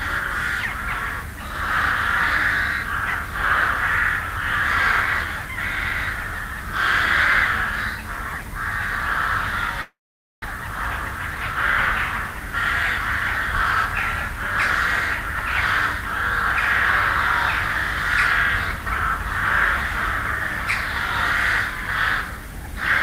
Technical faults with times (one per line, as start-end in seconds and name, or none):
9.81-10.46 long network dropout
11.18-11.56 jitter buffer speed-up
21.87-22.76 jitter buffer speed-up